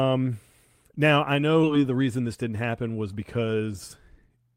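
At 1.63 s, just after "now I", the speech has a skip ahead. Roughly seven tenths of a second of audio is gone. It was dropped while later audio was already queued, so playback jumped forward. Nothing fills the hole and there is no silence. The two sides meet within about 20 ms, ending at 1.65 s. The result is an abrupt splice, with the sentence jumping past part of what was said.

From 3.60 s to 4.51 s there is a jitter buffer speed-up. The buffer was holding more audio than it wanted. To shrink the delay, the receiver cut many tiny pieces, each a pitch period or so long. In total it removed something like 70 ms. Playback runs at about 106% speed. Pitch stays the same, but the speech sounds slightly rushed.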